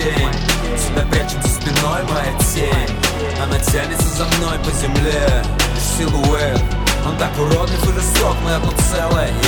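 Overlap between stream segments cut about 20 to 25 ms from the 1-second segment boundaries, so the audio skips briefly at 1.74, 2.72, 6.71 and 8.68 s.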